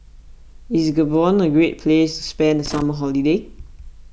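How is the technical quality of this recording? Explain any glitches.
The recording has one glitch. From 2.66 to 2.82 s the speech is broken by a short, irregular burst of crackle and scratching lasting about 0.16 s. That is loose connector crackle. A worn or dirty contact somewhere in the signal chain was shifting, so the circuit kept making and losing contact in quick succession. Each break chopped the audio into ragged fragments, and any DC offset on the line turned those interruptions into pops.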